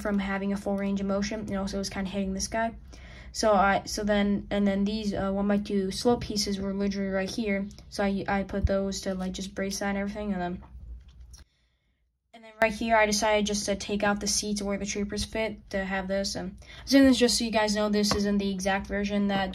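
From 11.43 to 12.62 s, the sound collapses to a faint remnant. It drops by about 24 dB. Centred content and low end all but disappear. The likely cause is one channel inverted. With one stereo side flipped in polarity, everything common to both sides cancels when they are summed to mono. What survives is only the small difference between them. That leaves a faint ghost of the sound until it returns at 12.62 s.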